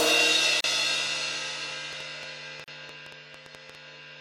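At 0.61 s there's a short hole in the sound, about 36 ms long: a gap at a join of encoded pieces. It looks like the audio was encoded in separate chunks, roughly every 2.0 s, and stuck back together without trimming the encoder's start-up delay and end-of-chunk padding, so a bit of silence survives at each seam. The edges are smeared, and the sound picks up right where it left off.

From 0.94 s to 3.76 s a train of clicks runs over everything, around 15 of them at roughly 5.8 per second but unevenly spaced. They're similar in shape and stick out by about 10 dB over the sound, coming across as a ragged ticking or popping. Something is injecting pulses into the signal path, likely interference from nearby gear or a faulty connection or power supply.

The second join gap lands at 2.64 s, right in the middle of the clicking, about 38 ms this time, two seconds after the first. It's the same seam pattern: a quick dropout with smeared edges, then the sound carries straight on.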